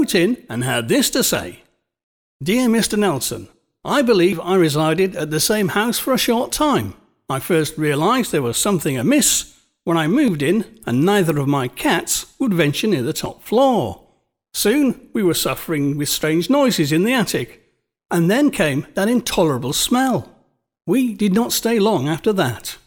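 At 1.35, 4.33, 7.30, 10.28 (after "when I"), 13.26, 16.23, 19.21 and 22.19 s, the speech skips briefly, with no gap, about every 3 s. This is audio missing between chunks, likely a short sliver lost each time a recorder buffer closes and the next opens.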